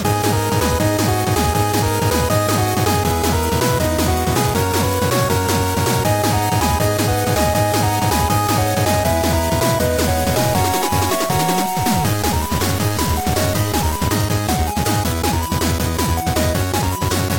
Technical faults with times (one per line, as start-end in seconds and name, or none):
10.04-14.08 stuck bit